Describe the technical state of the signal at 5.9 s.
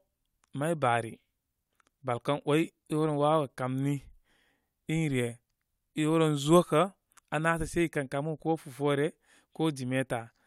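At 5.9 s the speech signal is intact, with no audible fault present at that moment.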